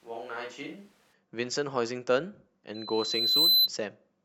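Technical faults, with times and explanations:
0.00–1.12 s, switch to a distant microphone: The close microphone's feed is likely missing, with the sound already picked up from further away when the clip opens. Speech is roomy, hollow and thin in the bass, about 10 dB quieter, with room noise only around 25 dB below it.
2.74–3.69 s, loudspeaker feedback squeal: A microphone is picking up the loudspeaker it feeds, and at 4 kHz the loop gain exceeds one. That single tone grows on itself for about three-quarters of a second into a squeal roughly 10 dB louder than the speech.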